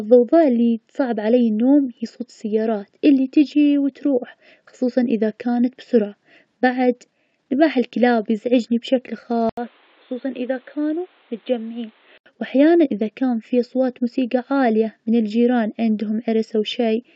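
From 9.49 to 12.26 s the input was likely switched to a poorer device. An 80 ms silence marks the switch. Then the speech turns dull and boxy with nothing above 4.3 kHz, drops about 5 dB, and sits over new background noise around 30 dB down.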